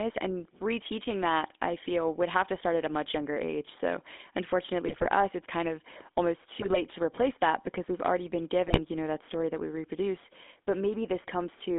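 The GSM full-rate codec runs throughout. It models the vocal tract, excites it with sparse pulses and confines the line to 250 Hz to 3.5 kHz, which makes the speech plainly buzzy and gravelly.

GSM bit errors then let flipped bits corrupt the decoder's filter, pitch and gain values. The speech breaks into squawks, pops and gargling at 4.87 to 5.07 s, just before "us it's kind of". It happens again at 6.60 to 6.77 s, after "it's kind of almost", and at 8.68 to 8.81 s, between "because we've already been" and "you know that story".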